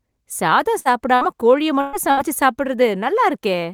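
Speech, with four bursts of packet loss where runs of packets never arrived: at 0.79–0.88, 1.15–1.24, 1.81–1.96 and 2.11–2.20 s, the receiver stretches the last sound into a fading buzz or hiss for about 60 ms (120 ms in the third), then jumps ahead past the missing audio.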